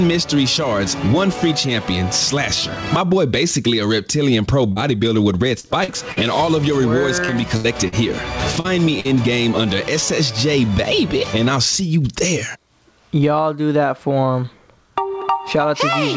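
A call path with input gain set far too high, likely with a fast limiter clamping it, makes the level pump by about 20 dB. Between 4.72 and 9.08 s, repeated packet loss leaves holes patched by extending the previous sound, producing choppy, robotic audio with gaps up to 77 ms. Nothing sounds above 8 kHz, which fits a G.722 call codec.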